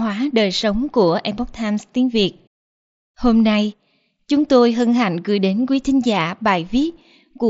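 No technical faults can be heard in the speech. It passes through a Bluetooth mSBC headset codec, which keeps the band up to 8 kHz and adds only a light grain on the louder sounds.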